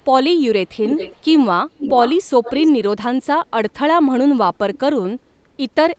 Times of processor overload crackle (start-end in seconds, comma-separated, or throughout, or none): none